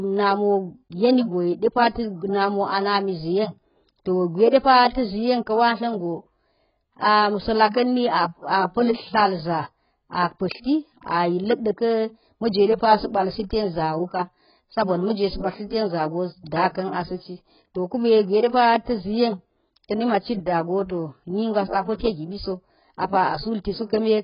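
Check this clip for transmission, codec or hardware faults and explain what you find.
One codec fault runs through the whole clip. Heavy AAC compression is the likely cause: speech cut off above 5.1 kHz, dull and smeared, fitting AAC-LC at roughly 12 kbps.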